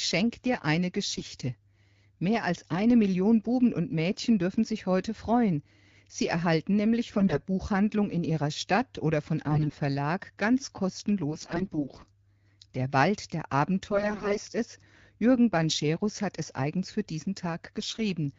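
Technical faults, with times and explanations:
1.09–1.22 s, 7.18–7.41 s after "erhalten nämlich", 9.50–9.78 s after "oder von", 11.31–12.05 s, 13.91–14.39 s, 17.80–18.00 s after "es eigens für diesen": AMR bit errors. Flipped low-priority bits misplace excitation pulses and skew gain and spectral values in the HD Voice decoding, so pitch and level hold while the sound turns hoarse and gargly, worst near 14 s. On a spectrogram the harmonics smear into scattered noisy energy; the waveform shows ragged, uneven peaks.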